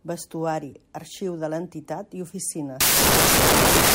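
From 2.81 s to the end, the reader assembles each sample from the wrong bytes, whether shifted by one byte, taken in swapped order, or read on a mistaken alignment. The low-order bits, which flip rapidly from sample to sample, end up as the high-order part of every value, so the speech is replaced by loud, harsh broadband noise.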